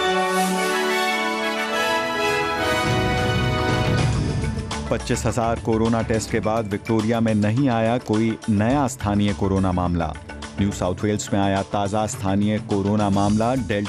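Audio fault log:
throughout: MP2 compression. Dull, gurgling, granular sound, likely from MPEG Layer II coding at a rate near 80 kbps. Starved upper sub-bands switch off and flicker, and the rest are coarsely quantised. A spectrogram shows a ragged top edge with blocky patches blinking in and out.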